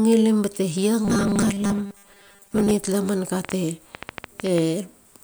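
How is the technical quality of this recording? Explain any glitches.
The recording has two clear glitches.

From 1.05 to 2.71 s, after "bate hia", the speech turns into a rigid, metallic 200 Hz buzz, the robotic sound from repeated short buffers. Most of this stretch is likely a 5 ms fragment repeated while fresh audio arrived too slowly.

From 3.45 to 4.59 s, after "tala man ka", a train of clicks of about ten unevenly spaced pops, roughly 8.8 per second, rises well above the speech. The cause is likely interference or a faulty connection injecting repeated pulses.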